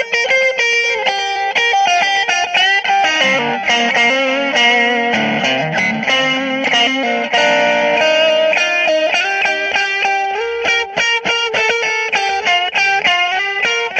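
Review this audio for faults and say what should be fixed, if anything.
Compressed frames skipped at 1.35 s and again at 6.67 to 6.69 s. The audio jumps ahead by roughly 100 ms at the first point and roughly 200 ms at the second. This fits about four and about ten lost frames of 23.2 ms each that were missing or rejected by the decoder. On a spectrogram, the texture shifts abruptly along a vertical seam. On a waveform, the envelope steps. To prevent it, verify file integrity after transfer or storage and re-encode from an intact source so every frame decodes.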